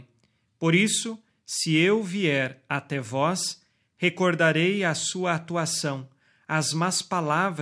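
No technical fault can be heard anywhere in this speech recording. At no point does anything in the sound suggest a problem in the chain that captured or carried it.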